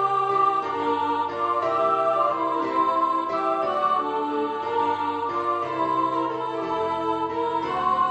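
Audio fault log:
No faults detected in this audio.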